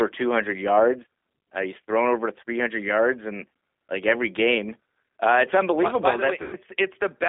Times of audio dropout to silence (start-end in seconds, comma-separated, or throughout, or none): none